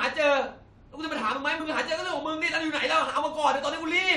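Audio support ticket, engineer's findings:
Two brief glitches where the audio lurches forward, at 1.59 s and 3.17–3.19 s, each dropping roughly 20 ms. Compressed frames skipped: frames missing or rejected by the decoder.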